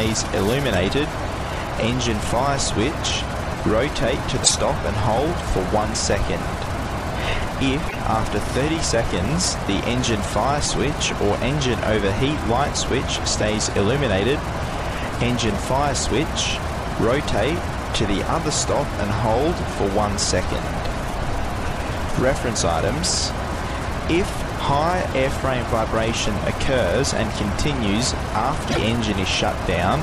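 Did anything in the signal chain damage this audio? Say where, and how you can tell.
Yes, at the codec stage. Damaged data in a compressed stream produces brief glitches at 4.40–4.51 s, 7.85–7.96 s and 28.70–28.78 s. The decoder misreads corrupted frames there.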